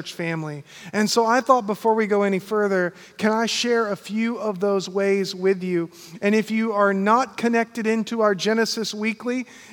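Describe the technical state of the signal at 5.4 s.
At 5.4 s the signal is intact, with no fault present at that moment.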